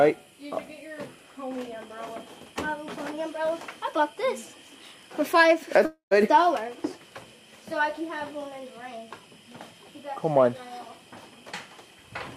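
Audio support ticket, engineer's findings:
Long network dropout, 5.85–6.13 s: sound decays into a fading buzz, then about 110 ms of silence; likely packet loss, receiver concealment filling 255 ms, with about 260 ms of audio never played.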